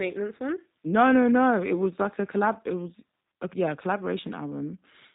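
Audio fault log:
Throughout: G.729 codec. The speech is rebuilt from a vocal tract filter, a pitch predictor and a few coded pulses per frame rather than carried as a waveform, so it sounds plainly rough and synthetic. Nothing passes above 3.8 kHz, which fits an 8 kbit/s G.729A stream.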